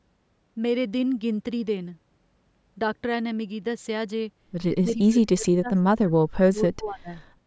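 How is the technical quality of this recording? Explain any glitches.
Two call-processing glitches appear near the end of this speech recording, which is band-limited with nothing above 8 kHz.

From 4.83 to 7.1 s there is speech suppressed in double talk. The voice dips and breaks into pieces for about two seconds in total, falling by around 35 dB at its deepest. This is likely an echo canceller turning the talker down while the far side speaks. A waveform shows the envelope collapsing in patches, and a spectrogram shows the energy thinning out.

From 4.89 to 4.93 s there is an echo leak: a brief, faint scrap of voice about 30 dB below the speech, delayed by 246 ms. It is likely loudspeaker sound that the canceller failed to remove. On a spectrogram it appears as a weak copy of earlier harmonics.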